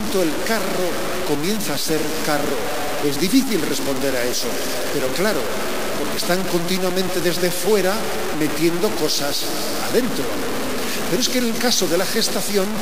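From start to finish, the audio is coarse and grainy. The grit shifts with the sound and sits nearly as loud as the sound itself. Quiet passages sputter or drop out. The likely cause is low bit depth without dither, truncated to about 4 bits.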